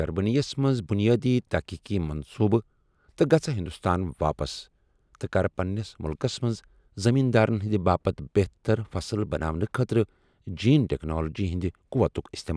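Nothing in this speech recording stands out as a technical fault at any point, so there's nothing here to flag.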